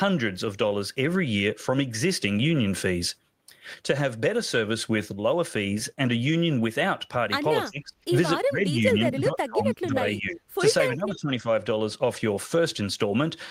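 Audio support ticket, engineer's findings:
Speech suppressed in double talk, 7.65–8.06, 8.42–8.81, 8.98–10.44, 10.91–11.47 s: speech dips or cuts out, up to about 30 dB down; likely echo canceller muting near-end during overlap.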